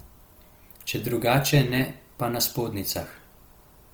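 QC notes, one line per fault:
Throughout: Opus compression. The speech has a rough, grainy texture, with tonal parts turned noisy; this likely comes from Opus in CELT music mode filling starved bands with folded or noise content, which fits roughly 24 kbps. Bandwidth stays full, extending to 20.5 kHz.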